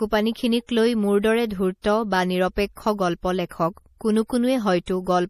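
MP3 compression runs throughout: nothing above 15 kHz, with watery, swirly treble and smeared consonants. This is likely MP3 at a low bitrate, around 40 kbps.

Pre-echo appears from 1.82 to 1.84 s and again at 4.86 s. The codec spread quantisation noise across each block, so a brief hiss precedes and softens the attack.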